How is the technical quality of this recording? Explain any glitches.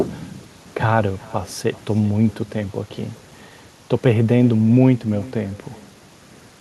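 The recording has one real problem: echo with no canceller, running through the whole speech clip. Everything spoken comes back around 400 ms later, about 24 dB down and thinner. That's what you get when the far end plays the call over a loudspeaker, their microphone picks it up again, and nothing strips it out before it returns across the network. At that level it's faint, like a ghostly trailing copy.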